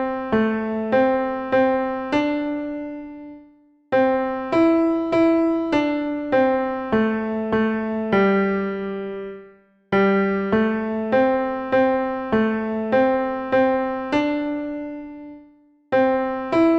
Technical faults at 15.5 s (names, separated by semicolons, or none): none